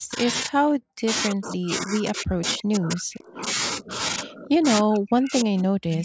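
Speech suppressed in double talk at 0.0–0.27 s, 0.46–1.1 s, 1.28–3.48 s, 3.77–4.0 s, 4.22–4.66 s and 4.82–6.04 s: the speech dips or breaks up, by up to about 40 dB, likely an echo canceller turning down the near talker while both sides spoke. Echo leak at 3.21–3.32 s: a faint copy of the speech, about 30 dB down, returns 292 ms late, likely loudspeaker pickup the canceller failed to remove.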